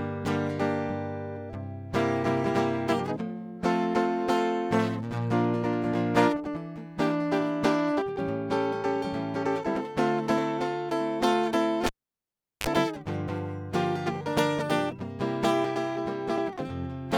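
It's a music clip, and at 11.86 s you get a cable pulled and plugged in. There's a pop, the music drops to near silence for about 0.75 s, then a 35 ms burst of 50 Hz mains buzz as the plug tip makes contact, and a second pop when the music comes back at 12.67 s.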